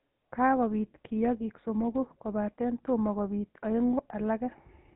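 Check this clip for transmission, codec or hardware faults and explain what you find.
The speech passes through a GSM full-rate codec from start to finish. The audible damage points to roughly 13 kbps. A spectrogram is empty above 4 kHz, with buzzy, gravelly pulse-driven excitation replacing natural voicing.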